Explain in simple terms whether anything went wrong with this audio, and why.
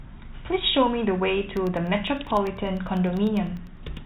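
Periodic USB or driver dropouts run from about 1.57 s to 3.97 s. Roughly every 0.1 s, a tiny sliver of the speech, far shorter than a millisecond, goes missing and is replaced by silence. Something in the system is briefly stalling the USB connection or the audio driver on a fixed schedule. The gaps therefore land at even spacing and are heard as a steady ticking that sounds only while someone is speaking.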